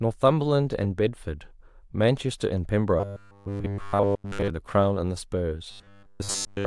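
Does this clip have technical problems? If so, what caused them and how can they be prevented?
Yes. The speech turns into robotic sound from repeated short buffers from 3.00 to 4.50 s and again from 5.71 s to the end at 6.67 s. In both stretches a rigid metallic buzz at 100 Hz is imposed on the speech, with essentially all of the audio made of repeats. The likely cause is audio arriving too late, so the playback software loops the last chunk, which fits a 10 ms buffer, while the real audio is skipped. On a spectrogram this shows as evenly spaced horizontal harmonics every 100 Hz. The waveform shows identical 10 ms cycles repeating. Larger jitter buffers, a higher-priority audio thread and stable network delivery prevent this.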